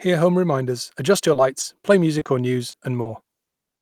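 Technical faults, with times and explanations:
1.33–1.37, 1.61–1.65, 2.19–2.27, 2.71–2.75 and 3.01–3.07 s, short concealed packet loss: 20 to 40 ms gaps were filled by extending the preceding speech, heard as brief smears or wobbles.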